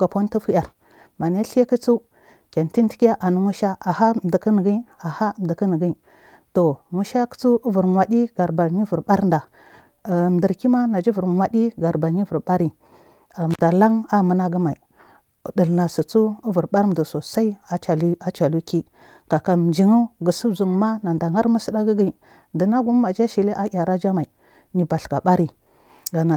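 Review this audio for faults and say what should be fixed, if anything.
Around 13.51 to 13.62 s there's an intermittent contact: a loose connection opens for about 52 ms, dropping the speech with crackly edges. Reseat or replace that cable and plug, and secure them.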